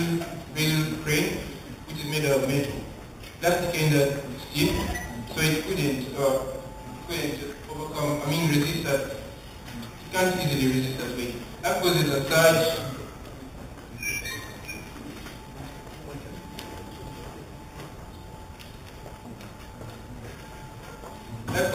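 Imaging from sample-and-hold upsampling runs throughout the sound. Each sample was simply repeated with no smoothing filter, which points to an 8 kHz source raised to 48 kHz. A mirrored copy fills 4 to 8 kHz at about 13 dB below the signal, heard as a metallic fizz that tracks the level and moves against the pitch.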